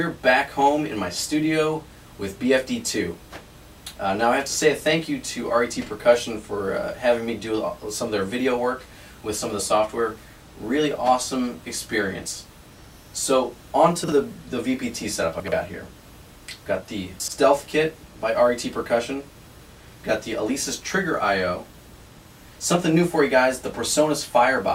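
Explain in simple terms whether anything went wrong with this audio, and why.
Chunks out of order occur three times, at 14.04 s, 15.4 s and 17.2 s. The audio moves in small pieces about 40 ms long, and at each spot one piece arrived late and was played after pieces meant to follow it: one place late at 14.04 s, two places late at the others. Nothing is missing, but the shuffled order makes each moment sound briefly jumbled.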